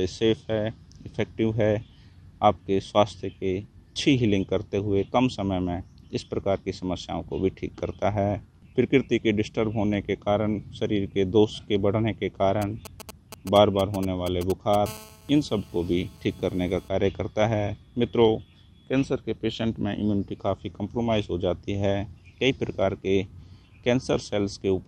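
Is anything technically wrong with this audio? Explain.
Yes, there are two faults from a nearby 2G mobile phone.

GSM signalling bursts run from 12.62 to 14.76 s. A phone that is only signalling, as it does before a call or text arrives, transmits short groups of radio bursts, and the audio circuit rectifies them into sound. The result is a galloping dit-dit-dit of brief buzzes at about 217 Hz, sitting roughly 15 dB below the audio.

GSM phone buzz follows from 14.86 to 16.89 s, once the phone is in a call. It then transmits bursts 217 times a second, and the audio circuit again rectifies the radio pulses. The result is a hard, raspy 217 Hz buzz with many harmonics, unrelated to the audio and nearly steady throughout, at about 24 dB below the signal.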